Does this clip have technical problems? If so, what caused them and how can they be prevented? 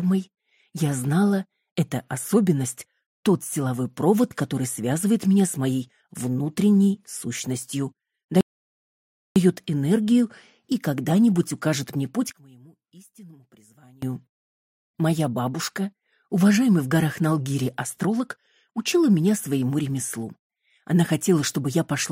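Yes. There are two problems.

A rebuffering stall begins at 8.41 s. The sound drops to silence until 9.36 s and then picks up exactly where it stopped. Nothing is skipped. The gap adds about 0.95 s to the playback. The player ran out of downloaded audio and had to wait for more data before continuing. Prevention: keep a larger playback buffer or use adaptive bitrate streaming so delivery stays ahead of playback.

From 12.32 s to 14.02 s, the sound suddenly becomes faint, about 26 dB quieter. The likely cause is one channel inverted: one stereo channel has flipped polarity, so the content shared by both channels cancels when they are summed to mono. Prevention: check the polarity of both channels and test the mono fold-down before release.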